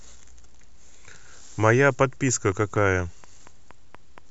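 From 2.29 to 4.19 s, about ten evenly spaced clicks tick through the speech at 4.23 per second, roughly as loud as the speech: a train of clicks, likely interference or a faulty connection.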